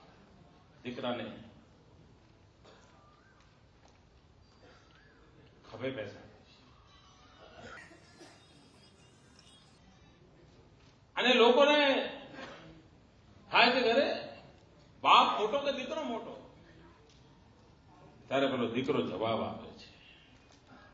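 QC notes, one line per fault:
7.77–9.78 s, wrong sample rate. The audio runs about 1.38 times too fast and sits roughly 5.6 semitones high, so it sounds hurried and shrill. Material recorded at 16 kHz appears to be played at 22 kHz without conversion. Speed and pitch therefore rise together.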